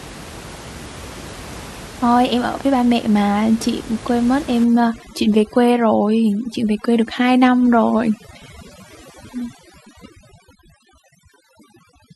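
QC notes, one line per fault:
4.64–12.15 s, overdone noise removal: noise reduction set far too strong cuts frequency bands to near nothing whenever they sit close to its noise estimate, taking quiet speech too, so the room noise drops and breaks up into twinkling specks.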